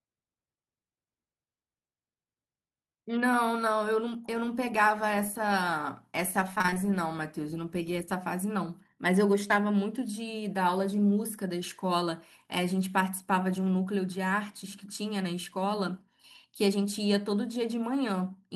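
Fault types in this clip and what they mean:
Repeated packet loss (robotic sound): From 6.55 to 6.78 s the speech turns choppy and mechanical, with small pieces dropping out. Six separate gaps, none longer than about 21 ms, were each patched by stretching the preceding sound, so nearly half that stretch is filled-in audio.
Short concealed packet loss: Around 9.48 to 9.52 s there is a brief smear in the speech. About 20 ms of audio arrived too late for decoding, and the receiver covered the hole by continuing the last sound before blending back into the real signal.
Lost packet rebuilt from error correction: At 9.50 s a 20 ms stretch sounds rougher and noisier but has no gap. One lost packet was replaced by a low-bitrate backup copy carried in the following packet, and the decoder played that coarser copy.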